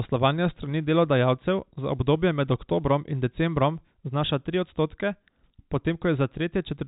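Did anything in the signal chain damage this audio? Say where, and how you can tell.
No, the speech arrives intact through the chain, carried in G.711 mu-law telephone coding at 64 kbps, whose cut-off near 4 kHz is simply the normal band edge of that format.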